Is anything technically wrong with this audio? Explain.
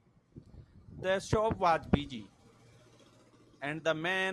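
No, the signal shows no technical faults and reaches the listener intact from its first moment to its last.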